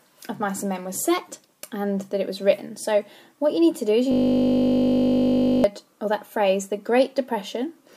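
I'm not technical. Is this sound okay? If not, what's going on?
No. From about 4.12 to 5.64 s there's a system hang loop. The computer briefly froze while the sound hardware kept replaying the same tiny 20 ms snippet, dozens of times in a row, so you hear a steady 50 Hz buzz instead of the actual sound.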